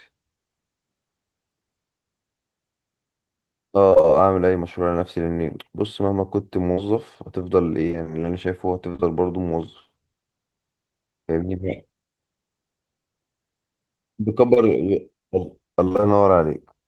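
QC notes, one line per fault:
3.89–4.06 s and 15.84–16.04 s: repeated packet loss (robotic sound). Four, then five, gaps, each under 30 ms, with about half of each span patched from the last sound. The result is choppy, and the spectrogram shows smeared, frozen harmonic strips alternating with real frames.
6.72–6.79 s: burst of packet loss. About 60 ms never arrived. The receiver held and faded the last sound, then resumed further on. The waveform shows a decaying continuation bridging the missing stretch.
7.87–9.04 s: scattered short gaps. About five isolated holes, the longest around 30 ms and roughly 100 ms in all, each patched by continuation. They are heard as brief ticks and hiccups and show as thin vertical smears on the spectrogram.
14.54–14.58 s: short concealed packet loss. About 24 ms was filled by extending the preceding sound and then blended back into the real audio. It is a brief smear that shows as a short stretched, blurred patch in the spectrogram.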